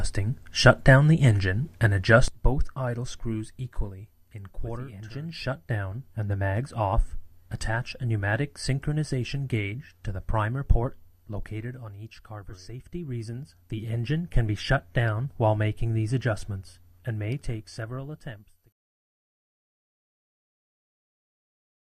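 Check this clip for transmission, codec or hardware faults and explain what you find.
One fault is present: a sudden gain jump at 2.28 s, after which the level drops by about 11 dB and stays down to the end. The change happens from one sample to the next, likely a gain setting or bit shift applied without a ramp. The sound and its background noise fall together. On the waveform the envelope steps down abruptly at that point, and on a spectrogram every frequency band darkens at once along a sharp vertical edge.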